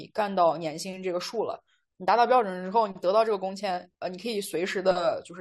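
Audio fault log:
No faults heard anywhere in this speech recording.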